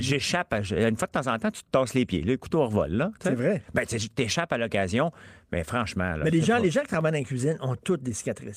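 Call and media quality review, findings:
No faults detected in playback.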